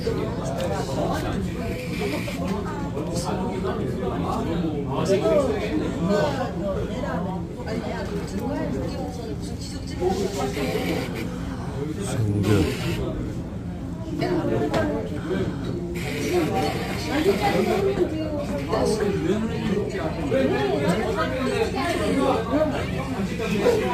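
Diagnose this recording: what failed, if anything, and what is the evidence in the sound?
The converter stage failed, with sample clock jitter throughout. A fine hiss and roughness ride on the sound, growing with loud, bright passages and vanishing in silence. The clock wanders by a few microseconds. Steep waveform slopes turn that timing error into noise roughly 35 dB below the signal.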